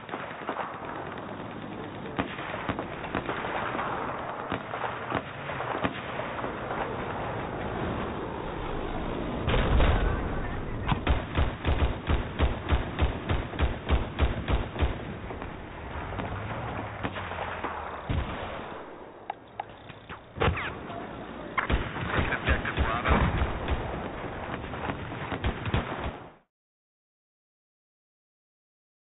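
No technical faults can be heard in this recording.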